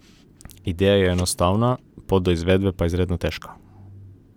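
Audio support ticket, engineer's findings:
Listened through the speech clip in full; nothing stood out as a fault, so no findings to log.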